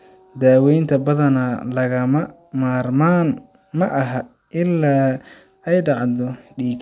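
No audible faults: no dropouts, clicks, distortion, pitch or timing errors, or level jumps anywhere in the speech.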